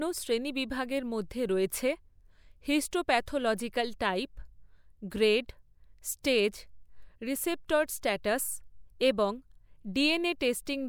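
Nothing here trips any alarms: no dropouts, glitches or other technical faults turn up anywhere in the recording.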